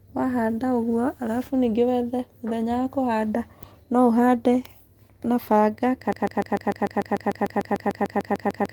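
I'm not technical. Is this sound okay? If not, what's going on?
No. From about 6.13 s to the very end, the speech gets stuck in a broken-record loop: the same 0.15-second snippet plays 18 times back to back. Most likely the playback or stream stalled and kept resending its last piece, so whatever followed is lost.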